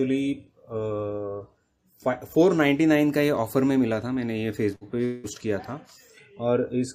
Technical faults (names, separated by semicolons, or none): burst of packet loss; long network dropout